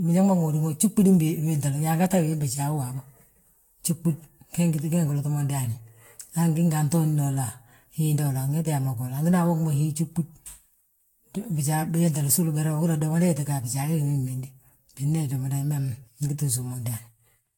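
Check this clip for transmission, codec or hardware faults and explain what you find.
One codec fault runs through the whole recording: generation loss. The likely cause is repeated lossy coding, with the speech decoded and re-encoded around ten times, and the artefacts point to a Vorbis-style codec at roughly 70 kbit/s. Each pass quantises on a shifted frame grid, so noise and spectral gaps stack up rather than staying fixed. The result sounds swirly, smeared and hollow, consonant attacks are blurred, and nothing is left above 19.2 kHz.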